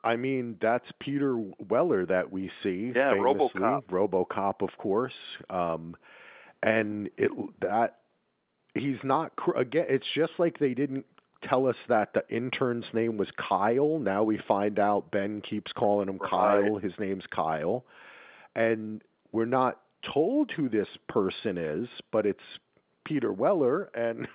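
No technical faults are audible.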